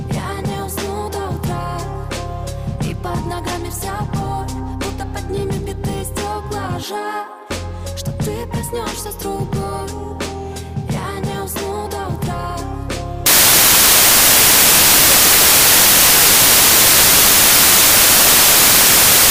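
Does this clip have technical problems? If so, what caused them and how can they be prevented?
Yes. Samples built from the wrong bytes, from 13.26 s to the end: the reader assembles each sample misaligned or byte-swapped, so the fast-changing low bits become the large part of each value, giving loud, harsh broadband noise. Checking byte order and frame alignment against the stream's declared format prevents it.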